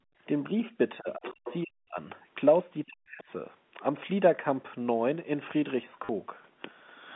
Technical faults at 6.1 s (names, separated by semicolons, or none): packet loss with last packet repeated